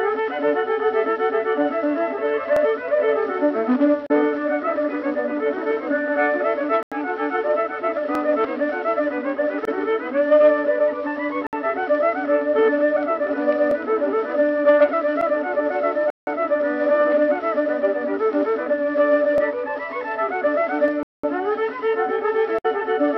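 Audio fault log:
6.83–6.92 s, 11.47–11.53 s, 16.10–16.27 s, 21.03–21.24 s: Bluetooth stall. The sound cuts abruptly to silence four times, for 88, 61, 168 and 204 ms, then carries on. The likely cause is a wireless link stall: delayed packets let the headphone buffer empty, so playback halts until resent data arrives. On a waveform each gap is a flat, silent stretch with hard edges. On a spectrogram it appears as a blank vertical band spanning every frequency.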